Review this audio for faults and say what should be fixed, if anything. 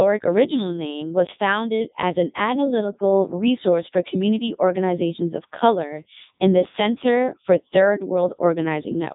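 The speech has gone through a Codec 2 vocoder for the whole clip, giving that robotic, buzzy quality. It rebuilds the voice from sine waves using only pitch and a spectral envelope, so the real waveform is lost. The band runs about 150 Hz to 3.7 kHz, with nothing above 3.8 kHz, and the heavy damage fits its top 3.2 kbit/s mode. To prevent it, record or route the source through a full-bandwidth path rather than a digital-radio vocoder link.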